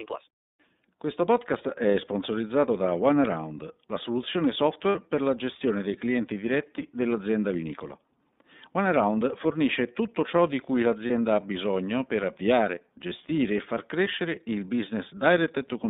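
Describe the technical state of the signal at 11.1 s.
At 11.1 s there is a lost iLBC frame, from 11.07 to 11.10 s. It falls between "tutto ciò di cui" and "ha bisogno per avviare". About 30 ms is missing. The decoder fills it by repeating the last pitch cycle mixed with noise. This gives a brief held, slightly buzzy vowel. Each frame decodes independently, so the voice recovers at once.

Underneath is the iLBC codec itself, audible throughout. The line passes only 200 Hz to 3.7 kHz. The 30 ms frame length points to iLBC's 13.33 kbps mode. Its damage is plainly audible as a rough, synthetic edge on the speech.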